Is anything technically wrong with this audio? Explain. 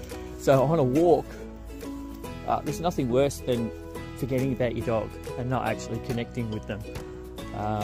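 Yes. From 0.94 s to 2.13 s there is a call bitrate drop. The connection's bandwidth estimate fell, so the encoder was forced to spend far fewer bits. The audio sounds consistent with a fall from roughly 96 kbps to about 19 kbps, held at its lowest for about 1.1 s. Starved of bits, the codec quantises coarsely and discards the upper frequencies, so this stretch sounds muffled, rough and watery before the fuller sound returns.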